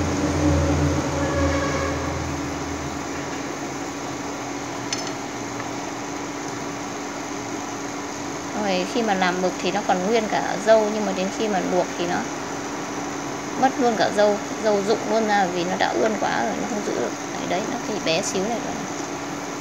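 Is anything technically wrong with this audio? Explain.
No, nothing technically wrong can be heard in this audio. It gives no technical fault to point to or explain.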